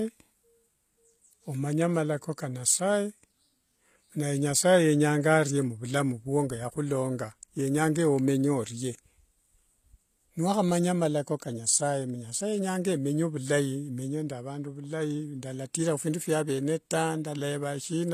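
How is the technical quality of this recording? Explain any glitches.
The recording has plainly audible codec damage from start to finish. It sounds like HE-AAC compression, likely at a low bitrate around 24 kbps. This codec spends its bits on the lower spectrum only. The treble is then rebuilt by copying lower bands upward and shaping them roughly. So the top end stays bright but is synthetic. Its harmonics do not match the real ones. S sounds come out gritty and lispy, with a metallic edge. Nothing reaches above 14.9 kHz.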